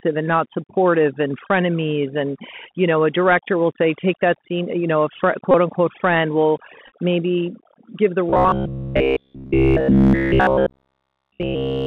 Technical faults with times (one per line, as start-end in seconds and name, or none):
0.00-11.87 overdone noise removal
0.00-11.87 Bluetooth CVSD headset codec
1.47 Bluetooth headset packet repeated
5.51-5.55 Bluetooth headset packet repeated
6.87-6.92 Bluetooth headset packet repeated
8.30-11.86 robotic sound from repeated short buffers